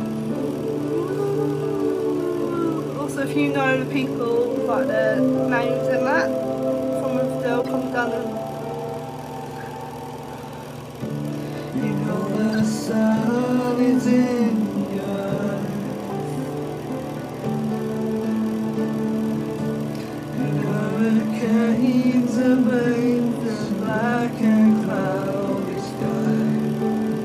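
Corrupt frame decoded at 2.78 s, 7.63–7.68 s, 12.53–12.59 s, 16.06–16.09 s and 20.62–20.64 s: damaged compressed frames were played anyway, spraying misplaced energy as brief blips, quietest at 2.78 s, strongest around 7.6, 12.5 and 20.6 s.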